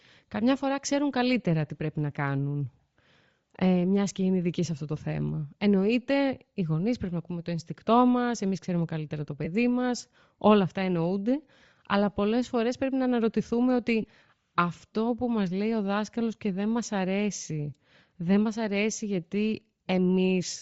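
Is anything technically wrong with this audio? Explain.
Yes. Throughout, the speech has a breathy, grainy top end, likely from Bluetooth LC3 compression, consistent with about 32 kbps and 7.5 ms frames, where lost upper bands are refilled with noise.

Lost LE Audio frames cause brief noisy smears from 9.45 to 9.47 s, after "εμεί ξέρουμε καλύτερα το", and from 14.02 to 14.04 s, after "πρέπει να αναρωτηθούμε ότι". Each gap of about 15 ms fits two lost frames that the decoder concealed by reusing the previous spectrum with random signs.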